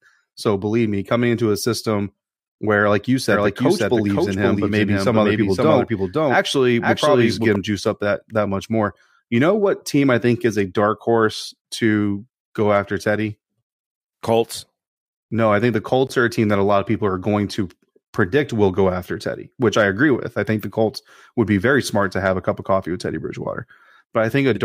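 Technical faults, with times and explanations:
3.32–7.56 s, doubled audio track: likely a slower second capture path adds an equal-level copy about half a second late, so speech after "system where like you" repeats without decay until "juiced up that that".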